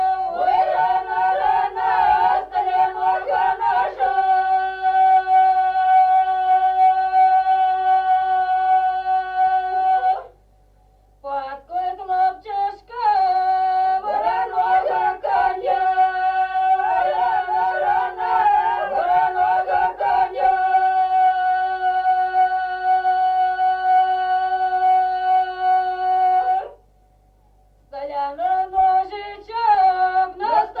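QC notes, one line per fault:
No faults heard anywhere in this clip.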